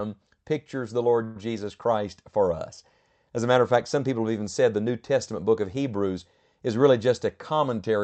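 At 1.10 to 1.13 s there is a short stall from a late packet. The sound is held about 17 ms too long, with a faint buzz. Nothing is lost.

At 1.24 to 1.37 s comes a call audio freeze. The sound stretches into a fading buzz for about 117 ms, never reaching silence, then resumes unbroken. Packets were likely delayed in transit, emptying the jitter buffer.

Both stalls sit inside the call path's narrowed band, which ends near 8 kHz.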